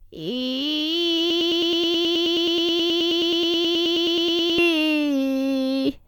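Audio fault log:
1.30–4.58 s, broken-record loop: the music abruptly locks onto a fragment of about 106 ms and stutters it back to back, identically, 31 times, giving a rapid mechanical chatter for over three seconds before normal playback resumes. The likely cause is the player, encoder or stream stalling and resending the last short fragment it held, so the music that belonged in that span never plays and is simply lost.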